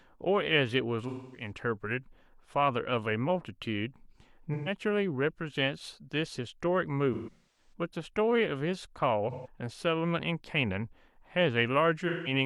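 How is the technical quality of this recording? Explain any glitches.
The speech is marred by repeated AAC frame loss with concealment at 1.08–1.51, 4.54–4.72, 7.13–7.73, 9.31–9.47 and 12.08–12.32 s. Lost frames were patched from the last good spectrum. The short gaps sound like a smeared, noisy or phasey patch. The longest, near 7.1 s, loses 9 frames scattered over about 0.43 s.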